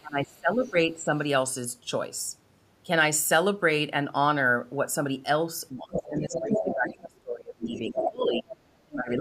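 Right from the start, 0 to 1.13 s, the talker gets pushed down by something like 25 dB. That's speech suppressed in double talk, most likely an echo canceller that couldn't tell the near talker from loudspeaker echo and ducked everything. Inside that stretch, around 0.61 to 0.72 s, a faint scrap of a second voice slips through, well below the talker. That's the other side's voice leaking through, likely residual echo the canceller didn't catch.

The big one runs from 5.71 to 8.51 s. The talker dips, again by roughly 25 dB at worst, for around three seconds in total. Meanwhile the far side comes through quite strongly, from 5.93 to 6.95 s at nearly the talker's level. Shorter bits follow at 7.75 to 7.79 s (faint), 7.97 to 8.1 s (loud), and 8.33 to 8.4 s (a bit quieter). Finally, from 8.85 s to the end, the talker is suppressed again, dropping by about 30 dB for the last third of a second or so.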